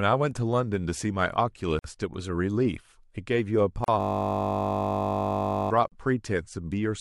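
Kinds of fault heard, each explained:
Gap at a join of encoded pieces: the speech was encoded in separate chunks about 2 s long and joined without trimming, so each chunk's start-up delay and padded final frame remain as dead air. The sound drops out abruptly, with smeared edges, then resumes where it stopped. This happens three times: a 52 ms gap at 1.79 s, and roughly 38 ms gaps at 3.84 s and 5.88 s.
System hang loop: the computer or its audio driver froze while the sound hardware kept replaying the same ring buffer. From 4.01 s to 5.71 s a single 20 ms slice of speech repeats about 85 times. A loop that short turns into a steady, flat 50 Hz buzz rather than a stutter, and it replaces the speech for nearly 1.7 seconds before normal playback returns.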